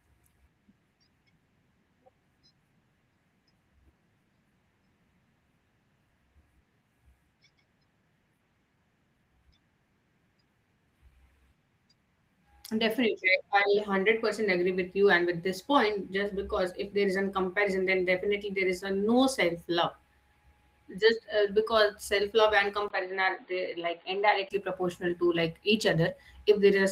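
From 22.88 to 24.51 s, after a 20 ms gap, the speech turns dull, quieter and faintly hissy, cut off above 4.6 kHz, likely an input switched to a poorer device.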